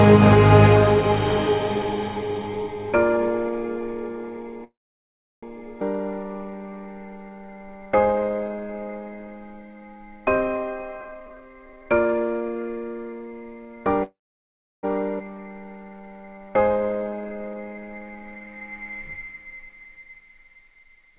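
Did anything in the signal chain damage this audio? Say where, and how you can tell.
Yes. All four faults come from the network and jitter-buffer stage of a call path, which also band-limits the audio to nothing above 4 kHz, consistent with G.711.

Call audio freeze at 4.64–5.45 s and 14.03–14.85 s: the sound stalls for about 0.8 s each time, and roughly 0.7 s of that is silence. On a spectrogram a brief fading smear gives way to a blank column. The likely cause is delayed packets draining the jitter buffer before playback resumes where it stopped.

Skip ahead at 5.81–5.83 s and 15.19–15.22 s: playback jumps forward with almost no gap, dropping roughly 0.4 s and 0.5 s of audio. The waveform shows an abrupt splice where mismatched material butts together. This fits stale or overflowing buffered audio being discarded.

Jitter buffer slow-down at 6.23–8.85 s (83% speed, 441 ms added) and 15.35–18.23 s (84%, 469 ms added): the sound is drawn out at unchanged pitch. 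Repeated pitch periods appear as stretched, smeared spectrogram features and regularly duplicated waveform cycles while the buffer rebuilds its reserve.

Jitter buffer speed-up at 11.01–13.85 s (127%, roughly 0.7 s removed) and from 21.08 s to the end (149%, about 50 ms removed): the sound is hurried at unchanged pitch. Events are compressed closer together on the spectrogram because short cycle-length pieces are cut to shrink an oversized buffer.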